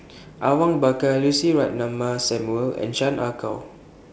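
No technical faults are audible.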